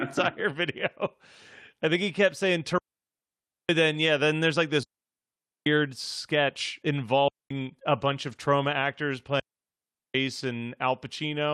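Speech, interrupted by four digital wireless dropouts. Each is a clean hole of near silence, entered and left with a very short fade. There is no noise burst either side. The first runs from 2.78 to 3.69 s, about 0.91 s, just after "think he kept saying" and before "then yeah then there's". The second runs from 4.83 to 5.66 s. The third, from 7.28 to 7.51 s, lasts about 0.22 s and ends just before "a bunch". The last runs from 9.40 to 10.15 s, after "trauma actors". The receiver lost too much data from the radio link and muted rather than play garbage. At 8.27 to 8.37 s there is a lost packet rebuilt from error correction. About 60 ms of sound turns rougher and noisier, but there is no gap. The decoder filled the loss from low-bitrate copies carried in the following packets. This points to a few separate lost packets.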